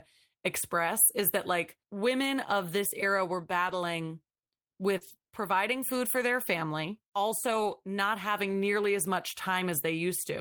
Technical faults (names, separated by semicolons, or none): short concealed packet loss; lost packet rebuilt from error correction